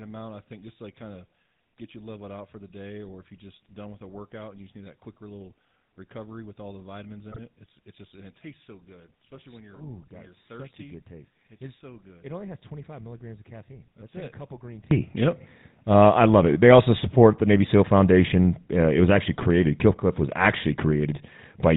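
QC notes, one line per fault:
Throughout, GSM full-rate codec: the speech carries a plainly audible buzzy, gravelly roughness, and nothing above 4 kHz gets through, so sibilants and brightness are gone. The coder reduces the voice to a vocal-tract filter excited by a sparse, regularly spaced pulse train, keeping only a third of the excitation detail, and at a rate that fits 13 kbps that coarse excitation becomes the grainy buzz in the voice.
0.0 to 14.9 s, one channel inverted: when summed to mono the voice drops by about 24 dB, before returning to normal level at 14.9 s. This is likely the result of one stereo channel having reversed polarity: the centred material common to both sides cancels in the sum, leaving only the small difference between the channels as a faint residue.
7.31 to 7.39 s, GSM bit errors: a brief squawking, gargled burst lasting under a tenth of a second, with a sudden jump and twist in tone. 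Corrupted bits reached the decoder across a span that fits about four speech frames, and with an error rate near 2.75 percent the filter, pitch and gain parameters decoded wrongly, bending the spectrum and spiking the level until clean frames resumed.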